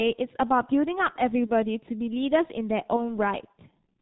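Throughout the speech, the G.723.1 codec leaves heavy damage. Nothing above 4 kHz survives, and the slow-updating voice model at a rate consistent with about 6.3 kbit/s makes the sound muffled and hoarse, with smeared consonants.

At 1.46 to 1.52 s, and again at 2.96 to 3.17 s, VoIP packet loss concealed by the speech codec appears. Each gap points to one 30 ms frame lost, which the decoder filled by extrapolating and fading. A brief smear results, and the second stays distorted longer as recovery lags.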